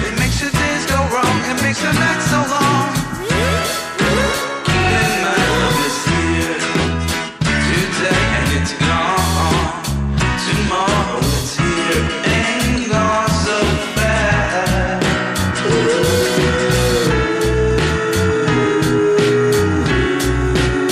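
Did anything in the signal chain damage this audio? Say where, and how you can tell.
No, nothing audible points to damage at any stage of the signal chain.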